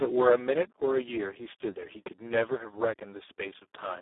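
From start to finish the speech carries heavy Speex codec damage: hoarse, noisy and edging toward robotic, which points to a very low setting around 4 kbps. The band sits roughly 300 Hz to 3.6 kHz, with nothing above 3.8 kHz.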